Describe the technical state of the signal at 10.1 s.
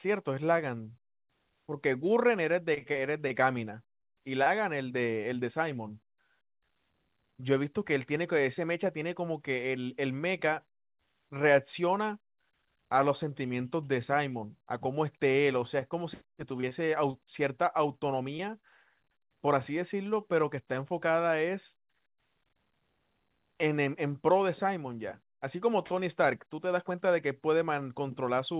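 At 10.1 s the speech is intact, with no dropout, glitch or distortion, and it carries the narrow telephone-band sound of the call path, with nothing above 4 kHz, consistent with G.711 A-law coding.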